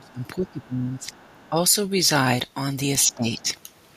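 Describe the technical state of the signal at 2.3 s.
At 2.3 s the speech signal is intact, with no audible dropout, distortion, glitch or other fault at that point.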